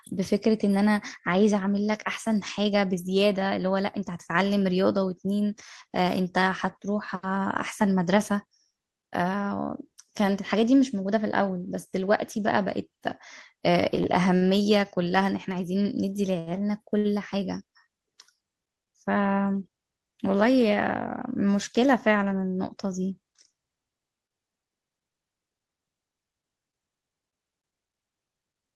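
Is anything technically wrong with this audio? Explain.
Yes. The speech passes through a call codec and jitter buffer, and the buffer's timing goes wrong in four places.

From 13.95 to 14.43 s there are repeated stalls (stutter): packets kept arriving late, so the jitter buffer ran dry three times. The receiver held the last sound for 73 ms in total, the longest hold 49 ms, which is about 15% of that stretch. The speech drags and stutters there.

At 16.39 to 16.49 s and again at 16.98 to 17.07 s, a short stall from a late packet occurs. Each time a packet missed its slot and the receiver stretched the preceding sound, by 73 ms and then 67 ms, before resuming. Nothing is lost, but a sound hangs on too long.

From 19.31 to 19.69 s a jitter buffer speed-up follows. With surplus audio queued, the receiver trimmed out pitch-period-sized slices, about 50 ms in all, so this passage plays at 111% speed. 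The pitch stays the same, but the speech sounds hurried.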